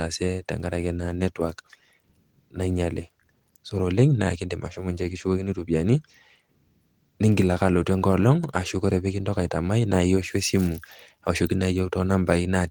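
A speech recording with no technical faults to report.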